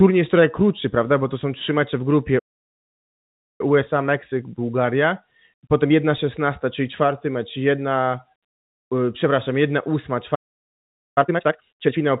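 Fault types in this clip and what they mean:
playback stall: The speech stops dead into full silence for about 1.2 s after "są trzy mecze w" (2.38 to 3.61 s) and about 0.81 s after "y przepraszam jedna ósma" (10.35 to 11.18 s), likely because the player ran out of data. These are long, clean gaps, not brief packet-loss clicks or smeared concealment.
time-compressed catch-up: After each stall the speech is hurried to work off the backlog. It runs at 1.1 times speed from 3.61 to 6.61 s, starting with "czyli czwarty mecz jedna", then at twice speed from 11.18 to 11.98 s. Pitch stays normal, which sets it apart from plain faster playback that would raise the pitch.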